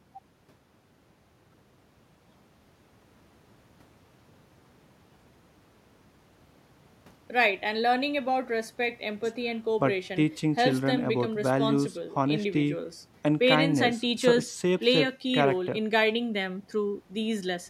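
No technical faults detected.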